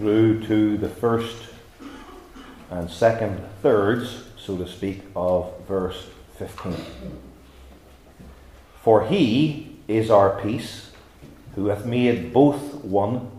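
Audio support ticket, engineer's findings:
No audible faults found on review.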